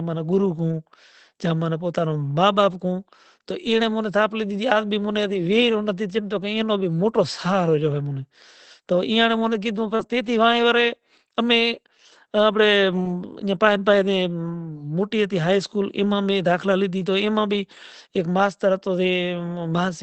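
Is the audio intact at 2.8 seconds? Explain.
Yes, the audio at 2.8 seconds is intact: the speech runs on without any dropout, glitch or distortion at that point.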